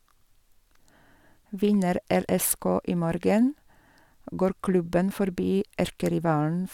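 No technical faults are audible.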